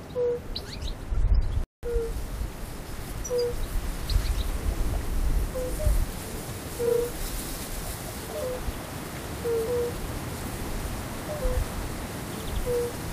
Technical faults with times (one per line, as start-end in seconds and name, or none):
1.64-1.83 rebuffering stall